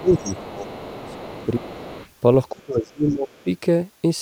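From 0.0 to 1.34 s, the echo canceller likely could not separate the talker from loudspeaker echo while both sides spoke, so it turned everything down. This is speech suppressed in double talk, and the voice dips by about 15 dB. Across much of the same span, from 0.13 to 1.46 s, the other side's voice leaking through shows that the canceller likely missed part of the loudspeaker sound. That second voice sits about 20 dB below the speech.

A shorter suppression dip of about 15 dB follows at 1.59 to 1.75 s. Leakage returns from 1.64 to 2.09 s, again about 20 dB down.

The deepest suppression runs from 2.51 to 3.47 s, with drops of about 30 dB. Inside it, a faint scrap of the other side leaks through at 3.3 to 3.42 s, about 35 dB below the speech.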